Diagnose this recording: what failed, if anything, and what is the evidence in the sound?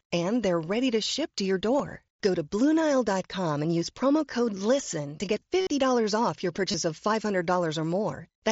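Concealed Bluetooth headset packet loss on the wireless link at 1.79 s after "to ship to your" (nearly hidden), 5.61–5.67 s after "to get", and 6.72–6.74 s. The receiver repeats recent waveform to fill the gaps, so the 60 ms run buzzes at full level before warbling back.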